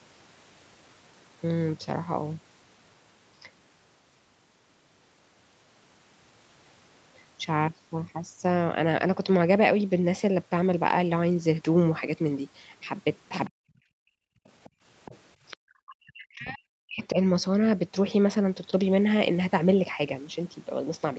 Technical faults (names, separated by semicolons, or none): other side's voice leaking through; speech suppressed in double talk; background gated by the echo canceller